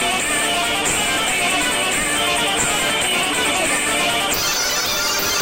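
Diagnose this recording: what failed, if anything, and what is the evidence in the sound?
The fault is audio read two samples at a time, a sample-format conversion failure. From 4.34 s to the end at 5.41 s, the sound runs at double speed and jumps an octave up. Each frame consumed two samples.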